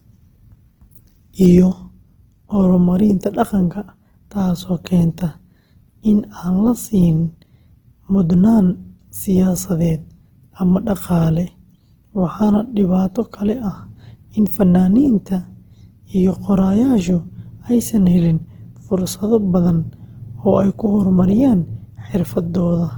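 Speech throughout carries plainly audible Opus compression damage, likely from encoding at a bitrate near 16 kbps in music mode: the voice sounds grainy and rough rather than swirling as MP3 would, and the band stays full up to about 20.1 kHz instead of narrowing.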